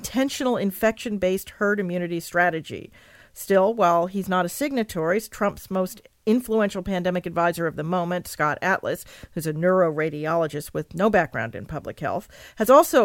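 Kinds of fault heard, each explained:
No faults can be heard anywhere in the recording.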